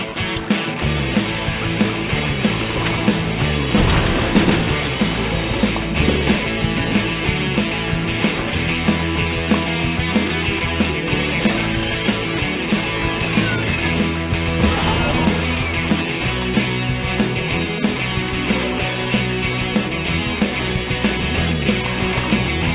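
At 0.14 s, a 20 ms stretch of sound gives way to soft steady hiss, likely sound dropped by the voice detector, its comfort noise distinguishing it from true dropout silence. Throughout, nothing above 4 kHz is heard, consistent with a G.711 call path.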